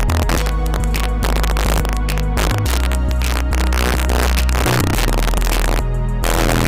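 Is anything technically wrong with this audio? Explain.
Yes. Throughout the recording, the loudest moments break into violent, sharp cracks, harsher and more abrupt than ordinary clipping. This is integer overflow. The signal was pushed about 3 dB past the largest value the integer format can hold, and instead of being limited, those peaks wrapped around to the opposite extreme of the range. Only a small share of samples, around two percent, crosses that ceiling, but each one jumps full-scale, producing the crack.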